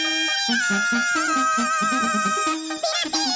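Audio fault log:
Throughout, wrong sample rate: sound runs twice as fast and a full octave high, speed and pitch rising together, which fits 8 kHz audio played at 16 kHz, unlike a pure pitch shift.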